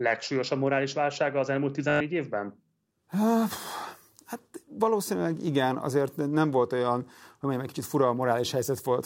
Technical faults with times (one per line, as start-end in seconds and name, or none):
1.90-2.01 Bluetooth stutter